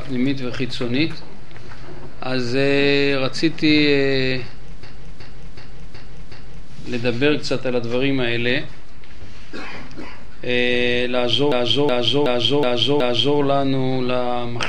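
At 4.83 to 6.69 s and again at 11.52 to 13.38 s, a system hang loop repeats one 0.37 s piece five times, a stutter at about 2.7 Hz that fits a 16384-sample ring buffer. The waveform shows identical repeated blocks, and the spectrogram shows matching vertical stripes.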